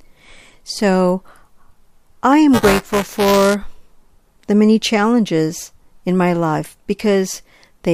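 From 2.53 to 3.54 s there is buffer tearing. The writer and reader of a ring buffer have slipped and cross each period. A small slice of each buffer is audio about 10 ms old. Hard joins give a robotic 345 Hz buzz, fitting a 128-sample buffer.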